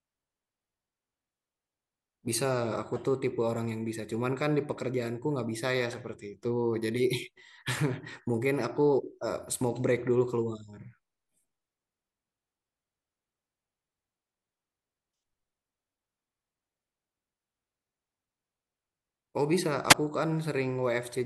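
At 19.89 to 19.94 s, a wireless microphone squelch dropout: the FM signal fades, hiss rises, and the receiver mutes the speech for about 9 ms before it returns.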